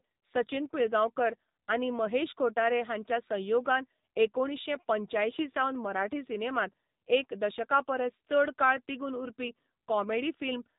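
From start to finish the speech runs through an AMR narrowband mobile codec, the old phone-call coder. Nothing above about 3.8 kHz survives, so it's muffled, and the plainly audible buzzy, synthetic edge fits a low mode around 7.4 kbps.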